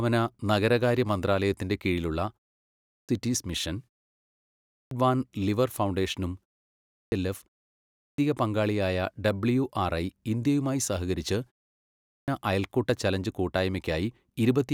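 Right after each short pause, the output starts late and bites off the opening of the next stretch of speech. That's a clipped start after a pause: the device drops into sleep during the gap and needs nearly half a second to wake and lock again. It happens at 2.62 s (after "നഗരകാര്യ മന്ത്രാലയത്തിന്റെ കീഴിലുള്ള"), 4.44 s, 6.68 s (after "വാൻ ലിയർ ഫൗണ്ടേഷനും"), 7.73 s (just before "പങ്കാളിയായ ഡബ്ല്യുആർഐ ഇന്ത്യയുമായി സഹകരിച്ച്") and 11.79 s. Each time roughly 0.44 to 0.49 s goes missing, so speech lurches in abruptly, without its first sounds.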